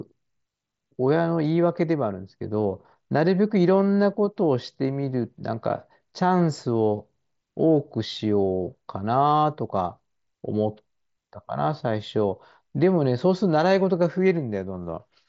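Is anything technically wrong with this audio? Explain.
No, nothing in this speech recording is technically wrong. It carries the sound of a Bluetooth mSBC headset link: the audio stops at about 7.7 kHz, and loud passages have a light grainy texture.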